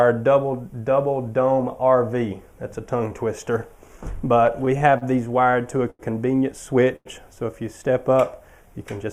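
From 4.46 to 5.04 s and again from 5.44 to 6.02 s the audio drags and stutters, with sounds briefly held. This is repeated stalls (stutter): the jitter buffer kept running dry, so the receiver stretched the last sound through gaps of up to 89 ms. At 6.96 s one sound hangs for about 94 ms before resuming. This is a short stall from a late packet, held until the packet arrived.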